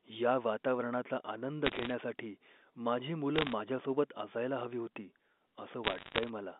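Speech heard over a narrow telephone band, roughly 250 Hz to 3.6 kHz, is broken up by three bursts of sharp ticking crackle: from 1.65 to 1.91 s just after "या वातावरणाचा आनंद", from 3.36 to 3.53 s, and from 5.84 to 6.29 s. These are bit errors on a digital phone line. Flipped bits in the 8-bit A-law samples, roughly 0.7 to 1 percent of them, corrupt single samples, and hits on sign or high-order bits jump into sharp ticks over speech that is otherwise unchanged.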